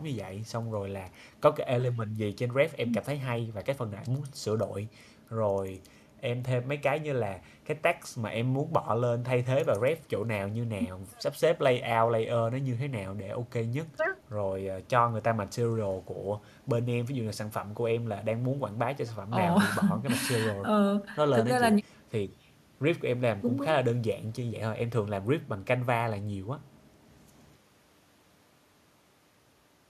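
Nothing in this speech recording points to a technical fault anywhere in the signal.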